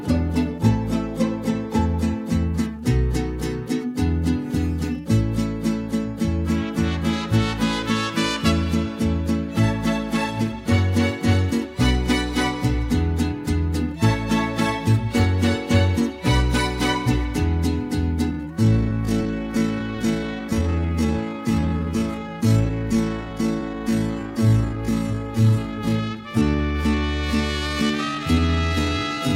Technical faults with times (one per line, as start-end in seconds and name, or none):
18.29-29.35 time-stretched section